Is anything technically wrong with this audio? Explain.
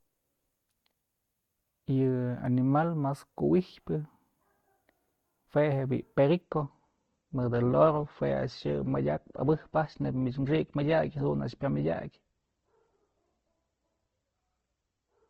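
Yes. From 6.41 s to the end, the speech drops to a lower-bitrate adaptive stream. The quality switches abruptly, and nothing above 8.1 kHz survives, which fits a low Opus rate.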